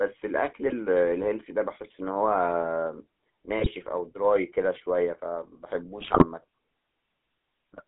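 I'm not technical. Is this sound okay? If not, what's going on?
No. The whole recording went through the GSM full-rate codec, the sound system of early mobile phones. It rebuilds the voice from a rough model, so it sounds buzzy and gravelly. Everything above about 3.6 kHz is gone, leaving a thin, phone-like tone.

There are also GSM bit errors, where parts of the signal were corrupted on a weak mobile link. The voice briefly squawks, pops or gargles from 0.62 to 0.73 seconds, 3.58 to 3.72 seconds, and for the longest stretch from 5.98 to 6.25 seconds.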